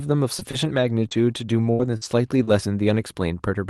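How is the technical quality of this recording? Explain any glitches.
The quality is hurt by one stretch of packet loss. Repeated packet loss (robotic sound) from 0.39 to 2.49 s: six short dropouts, the longest about 79 ms, each patched by stretching the previous sound, which makes the speech choppy and robotic.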